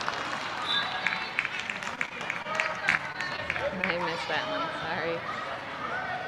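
Between 1.95 and 3.40 s the audio breaks up with repeated packet loss, giving a choppy, robotic texture. Short dropouts recur throughout, the longest about 21 ms. Each is patched by extending the preceding sound, about 142 ms of fill in total, and about 80 ms of material is lost outright. From 3.82 to 3.85 s there is a short stall from a late packet. The jitter buffer ran dry, so the last sound was held for about 17 ms until the packet arrived, then playback resumed with nothing missing.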